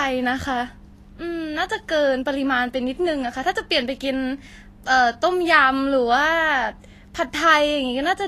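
From start to finish the speech has a hissy, grainy top end, consonants smeared and tonal parts roughened, with nothing above 14.2 kHz. The likely cause is Vorbis compression at a low setting, around 34 kbps: the encoder drew a smooth spectral floor and quantised the treble so coarsely that fine detail turned into noise of similar energy. Unlike a plain low-pass filter, the band under the cut-off is noisy rather than clean and dull.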